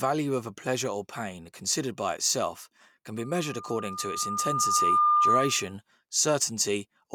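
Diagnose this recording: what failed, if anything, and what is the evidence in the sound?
Loudspeaker feedback squeal from 3.17 to 5.74 s, just after "considered by itself can": a steady 1.2 kHz tone swells over roughly two seconds to about 10 dB above the speech. The acoustic loop from playback back into the microphone has gain above one at that frequency.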